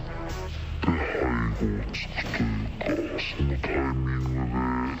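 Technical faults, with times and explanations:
Throughout: stereo read as mono. Everything plays at half speed and an octave low, because interleaved left and right samples are being read in sequence as one channel.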